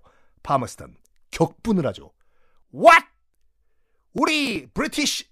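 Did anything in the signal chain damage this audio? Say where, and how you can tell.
Yes. The driver and buffer stage broke down from 3.98 to 4.57 s, where the speech picks up a gritty tearing that stops cleanly afterward. This is processor overload crackle: the processor fell behind and missed a run of buffer deadlines, and each missed block was skipped rather than refilled, leaving a tiny hard-edged gap. The tick spacing points to very short buffers of around 1.5 ms, with something like fifteen dropped in that stretch.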